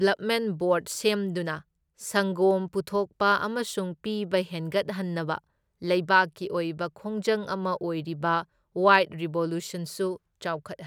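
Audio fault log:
No fault is logged for this speech.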